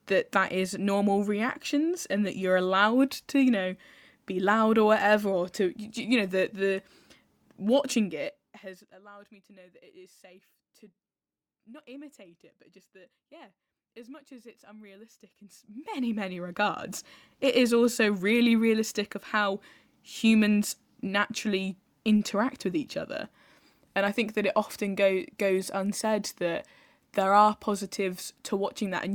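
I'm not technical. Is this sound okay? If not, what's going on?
Yes, nothing stood out as a problem when I listened to this speech recording.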